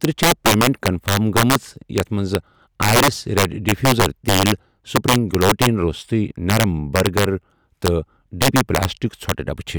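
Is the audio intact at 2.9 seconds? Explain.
No. Integer overflow runs through the whole clip, including 2.9 seconds: the signal is driven about 7 dB past the integer limit, and instead of being limited, a small share of peaks wrap to the opposite sign, producing violent cracks on the loudest moments of speech.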